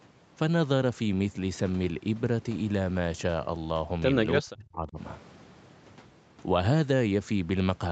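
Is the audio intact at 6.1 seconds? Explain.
Yes, at 6.1 seconds the speech is intact, with no dropout, click, distortion or other fault at that moment.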